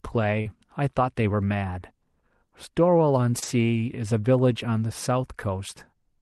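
At 0.41 s, about 40 ms of audio failed to reach the decoder in time, a short concealed packet loss. The receiver filled roughly 37 ms by extending the preceding sound, continuing its pitch where it was voiced or shaping noise where it was not, and then crossfaded back into real audio. It comes across as a brief smear or wobble through 0.47 s, and a short consonant there could disappear.

Overlapping from 0.45 to 0.51 s is a lost packet rebuilt from error correction. About 40 ms, which points to two lost packets, was replaced with the low-bitrate backup copies that Opus carries in the following packet. Nothing drops out, but those frames sound coarser and noisier than the surrounding audio, which otherwise comes through a 12 kHz-bandwidth Opus path at around 32 kbps.

The same pair returns later. At 3.39 s a second short concealed packet loss of about 20 ms is bridged with roughly 29 ms of extrapolated sound, causing another quick smear or wobble. 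Inside it, from 3.42 to 3.44 s, about 20 ms, which fits a single packet, is rebuilt from error correction, adding a short rough, noisy patch before the audio recovers.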